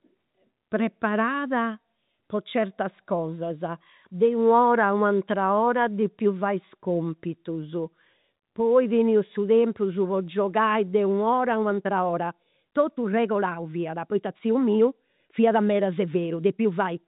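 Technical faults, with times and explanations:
11.58 to 17.08 s, time-stretched section: from this point to the end, the pace jumps abruptly to 1.45 times the earlier rate while the pitch stays where it was, giving a rushed quality. The likely cause is software squeezing this stretch to fit a shorter length and holding the pitch by dropping short pieces of the waveform. The narrow telephone band, with nothing above 3.8 kHz, continues unchanged across the join.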